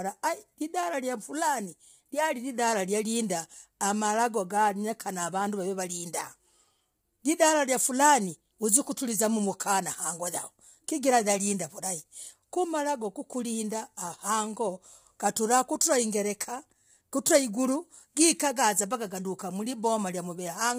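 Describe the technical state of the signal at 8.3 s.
At 8.3 s, as throughout, the speech is likely under heavy low-delay AAC compression, its short frames resolving harmonics poorly at about 24 kbps, leaving rough, grainy voicing, noise between harmonics, and nothing above 15.6 kHz.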